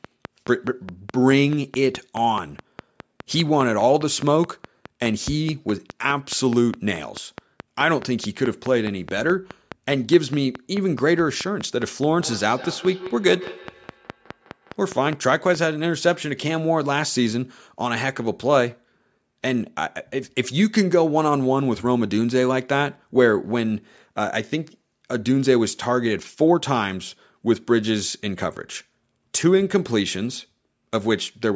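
From 0.05 to 15.56 s a train of clicks ticks over the speech and through its pauses, about 4.8 per second at a steady pace, some 70 in all, peaking roughly 10 dB above the signal. Interference from nearby equipment is the likely cause. On a waveform they are evenly spaced needle spikes; a spectrogram shows thin vertical lines.

From 12.19 to 15.03 s there is feedback echo between two devices: another device in the room replays the call, and this microphone picks it up again. Each word returns about every 150 ms, thinner and ringing, at most about 16 dB below the speech. A spectrogram shows fainter, delayed copies of each word.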